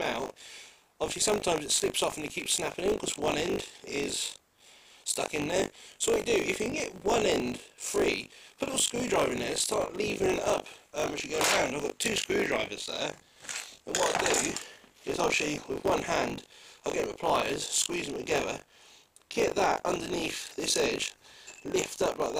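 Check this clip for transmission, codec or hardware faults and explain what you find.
One fault runs through the whole clip: buffer tearing. A robotic 50 Hz rattle sits on the sound whenever signal is present. Writer and reader cross inside every buffer, splicing in about a fifth of audio from roughly 40 ms earlier.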